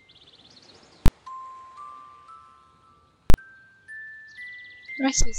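The audio hits two loud bangs, at 1.06 to 1.08 s and 3.3 to 3.34 s, classic invalid numbers at full scale. A calculation spat out infinite or invalid values that pinned the output to one extreme value for 20 ms and then 40 ms blocks.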